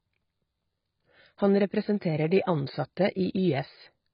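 AAC compression runs throughout: the speech has nothing above 5.1 kHz and sounds dull and smeared, with a warbling, fizzy texture on sibilants. The likely cause is heavy AAC-LC coding at a very low bitrate, around 16 kbps, cutting the top band and starving the rest of bits.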